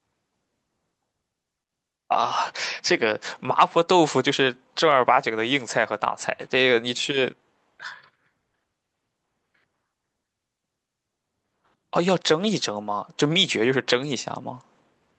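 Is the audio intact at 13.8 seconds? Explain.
Yes, the audio is intact at 13.8 seconds, with no dropout, glitch or other fault at that moment.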